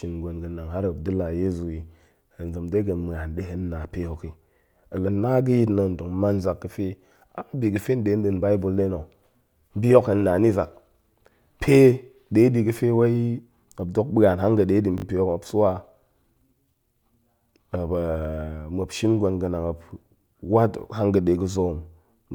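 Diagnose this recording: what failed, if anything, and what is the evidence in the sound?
A repeated buffer at the driver or buffer stage, 14.98 to 15.04 s: a short speech fragment, consistent with 20 ms, sounds four times with hard joins, a brief buzzy stutter.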